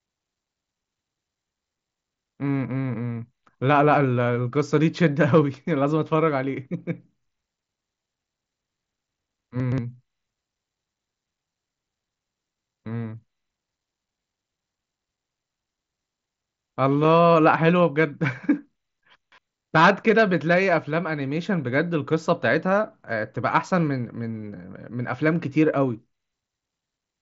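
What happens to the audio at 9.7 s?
Between 9.6 and 9.78 s the chunks play out of order. One 60 ms chunk arrives two chunks late and plays after the chunks that should follow it, so the sound jumbles briefly, with three hard joins. On a waveform or spectrogram these joins appear as abrupt steps and thin vertical broadband lines reaching the band's top near 7.7 kHz.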